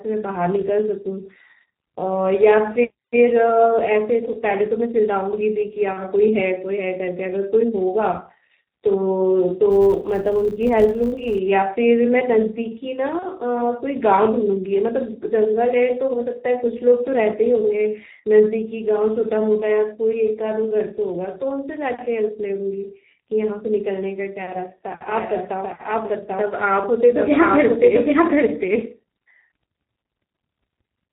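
Throughout the speech, the G.723.1 codec leaves the audio muffled and hoarse, with smeared consonants; its heavy damage suggests a bitrate around 6 kbit/s. On a spectrogram, nothing appears above 4 kHz, and the formant bands look coarse and blocky in 30 ms steps.

From 5.93 to 6.01 s, and again from 13.19 to 13.26 s, VoIP packet loss concealed by the speech codec stretches the sound into a brief buzzy tone that fades. Each gap is consistent with a single lost 30 ms frame. The spectrogram shows smeared, repeated harmonics and a waveform dip that recovers slowly.

Between 9.71 and 11.39 s, a filter restarted on every block produces a regular 100 Hz buzz that rises and falls with the speech level. Each block starts from silence with a small transient every 10 ms, visible as evenly spaced vertical lines on a spectrogram and repeating spikes in the waveform.

From 25.08 s to the end, a doubled audio track places a second full-band copy about as loud as the original and trailing by roughly 0.7 s. 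This copy is most likely a second capture through a slower path. The spectrogram shows each syllable's pattern repeated, shifted, dry and without decay.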